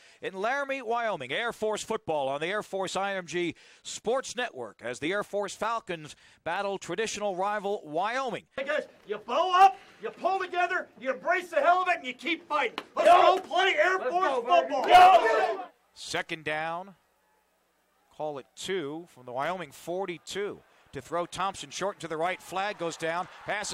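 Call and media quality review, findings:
Nothing stood out on listening, and there is no finding to raise against the component chain for this clip.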